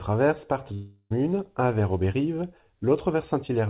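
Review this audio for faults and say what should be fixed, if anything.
From 0.74 to 1.12 s the speech breaks off: the last sound is drawn out as a fading buzz for about 0.36 s, then roughly 40 ms of near silence, before speech resumes at "un vers" with about 0.36 s of content gone. This is likely a long network dropout, with the receiver concealing the gap by extending the last sound. Unlike a brief packet loss, the fill outlasts a few tens of milliseconds and decays to silence. Band-limiting at 4 kHz fits a G.711 narrowband path. Prevent this by stabilising the network link and enabling redundancy or forward error correction on the call.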